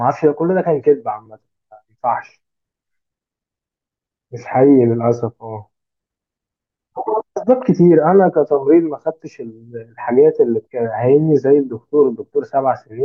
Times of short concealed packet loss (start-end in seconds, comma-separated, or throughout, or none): none